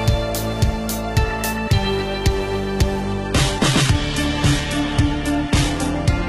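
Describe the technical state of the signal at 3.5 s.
At 3.5 s the signal is inside a drop to a lower bitrate in the adaptive stream, running from 3.02 s to the end. The quality changes abruptly with no gap, nothing above 11.8 kHz, and codec artefacts, which fits a switch from full-rate AAC to low-bitrate HE-AAC.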